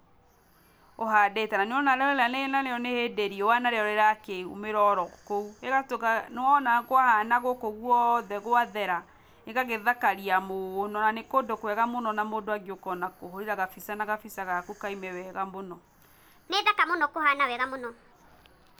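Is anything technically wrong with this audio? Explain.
Yes. From 16.48 to 18.12 s a section at the wrong speed jumps in: the speech suddenly runs about 1.36 times too fast and rises roughly five semitones, sounding hurried and chipmunk-like, then snaps back. The likely cause is that stretch being replayed against the wrong clock. On a spectrogram, harmonics and formants step upward and syllables compress horizontally; the waveform shows tighter, shorter bursts with abrupt boundaries at both ends.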